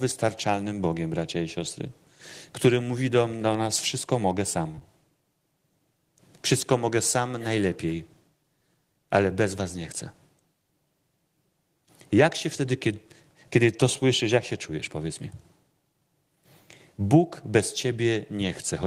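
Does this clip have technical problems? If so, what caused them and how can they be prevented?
Yes, there's short concealed packet loss around 4.71 to 4.83 s: three back-to-back 20 ms gaps at 4.71, 4.75 and 4.79 s where the decoder patched over missing audio by extending the speech, giving a brief smear. A deeper jitter buffer or forward error correction would help.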